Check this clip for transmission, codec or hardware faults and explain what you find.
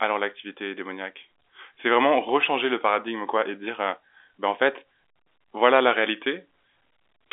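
No transmission, codec or hardware faults turn up anywhere in the speech. The G.711 telephone coding is audible as the familiar narrow phone-line band of roughly 300 Hz to 3.6 kHz, with nothing above about 3.8 kHz.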